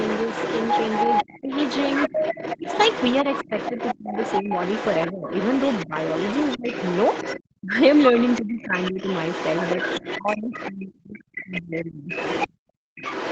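The echo canceller likely failed to remove the far end's loudspeaker sound from the microphone, so the other side's voice is leaking through for the whole clip, only a little quieter than the talker, as a second voice running underneath and often sounding thin and chopped.

Between 1.41 and 6.68 s, 7.6 and 8.99 s, and 10.18 and 12.09 s, the canceller likely couldn't separate the talker from that echo during double talk and turned both down. The result is speech suppressed in double talk: the talker's voice dips sharply and breaks into pieces. The cuts are deepest in the later two stretches and add up to roughly a second or more in the last one.

From 12.53 to 12.95 s the canceller clamps the microphone hard while the loudspeaker plays. This is background gated by the echo canceller: the room sound drops by about 34 dB for that moment, leaving near silence, then returns as the canceller releases.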